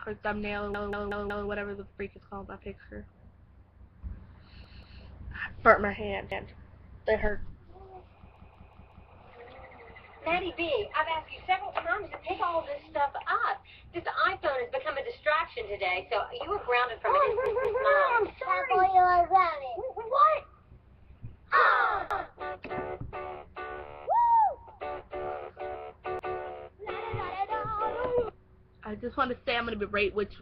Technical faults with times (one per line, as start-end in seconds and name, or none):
0.74-1.49 repeated buffer
4.64-5.02 repeated buffer
6.32-6.50 repeated buffer
8.36-9.10 repeated buffer
17.46-17.83 repeated buffer
22.11-22.29 repeated buffer
26.19-26.38 repeated buffer